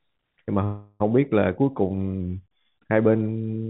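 From 0.64 to 1.02 s there is a call audio freeze: the speech stops and the last sound is stretched into a fading buzz for 360 ms, then resumes where it broke off. The likely cause is late packets draining the jitter buffer, so nothing is lost, but everything afterwards runs 360 ms later.

Between 2.21 and 2.78 s a drift correction step slows the speech by 6.2% and drops its pitch by 111 cents, just over a semitone, before it snaps back to normal. This is likely clock-matching software adjusting the playback rate in one jump to rebalance its buffer. Through both faults the band stops at 4 kHz, which fits a narrowband telephone codec.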